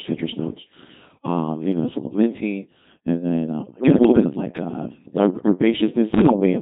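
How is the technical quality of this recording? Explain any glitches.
Technical quality is poor: the whole recording passes through a very low-rate digital voice codec, and two short stretches are further corrupted by transmission errors.

Throughout, the speech carries heavy Codec 2 vocoder damage, consistent with the 2.4 kbit/s mode. At that rate the decoder does not reproduce the original waveform. It rebuilds the voice from sine-wave components using transmitted pitch, voicing, energy and spectral-envelope parameters. The result sounds robotic and buzzy, and any detail beyond a single voice is smeared or lost.

Bit errors on digital voice radio appear from 3.62 to 4.24 s and again from 6.14 to 6.40 s, at roughly one bit in twenty. Each frame of this codec packs pitch, level, voicing and spectral shape into very few bits, so a flipped bit corrupts a whole frame's parameters. The voice jumps abruptly in pitch, loudness and timbre, breaking into bleeps, warbles and robotic gibberish. 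The first burst is longer, lasting about 0.6 s, and fits around 25 damaged frames.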